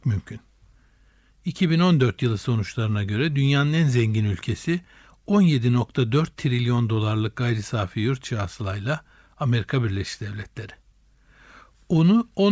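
A speech recording with no technical faults to report. Nothing in it calls for a time or a cause.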